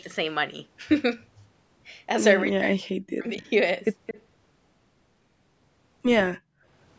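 From 2.43 to 3.46 s, the echo canceller likely could not separate the talker from loudspeaker echo during double talk, so speech is suppressed, dipping up to about 40 dB for roughly 0.7 s in total. At 4.06 to 4.22 s, a far end's canceller likely let its microphone pickup through, an echo leak: a brief copy of the voice returns 219 ms late, about 10 dB below the speech. From 6.38 to 6.64 s, the echo canceller gated the microphone while the loudspeaker played, so the background drops by about 34 dB for around 0.3 s before returning.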